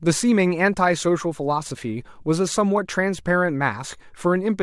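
No technical faults can be heard anywhere in the recording.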